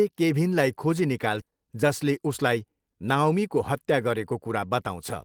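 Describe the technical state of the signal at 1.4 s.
Right after "केभिनलाई खोजी", the speech lurches forward between 1.41 and 1.43 s. Around 0.4 s of talk is simply gone, and the two sides are butted together with no silence or fill, so the sound snaps abruptly from one point to a later one. This is a skip ahead: a stretch of audio was discarded while later audio was already queued, and playback jumped straight to it, pulling the stream about 0.4 s closer to live.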